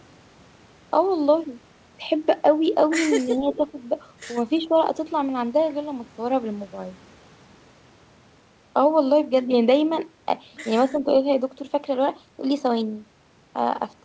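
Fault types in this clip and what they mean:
Speech suppressed in double talk: Between 3.26 and 3.78 s the voice dips modestly, in patches totalling about a third of a second. The likely cause is an echo canceller turning everything down while both sides spoke. Unlike a network dropout, the sound dips rather than vanishing.
Echo leak: From 3.52 to 3.57 s a faint copy of the voice, well below the speech, returns 331 ms late. This is likely residue an echo canceller failed to remove. It differs from room reverberation because it is a distinct delayed repeat, not a smooth decaying tail.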